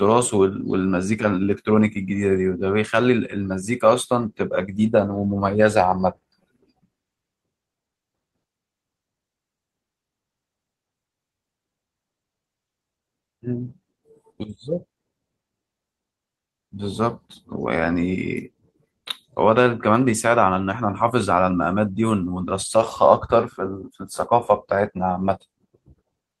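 No faults found in this speech; the call-path coding is audible as the expected band limit near 12 kHz and its usual coding noise, with no dropouts, glitches or timing irregularities anywhere in the recording.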